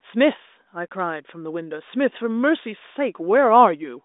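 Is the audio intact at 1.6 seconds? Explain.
Yes, the audio is intact at 1.6 seconds; the speech comes through the G.726 ADPCM telephone path at 40 kbit/s with nothing above about 3.8 kHz and at most faint coding noise.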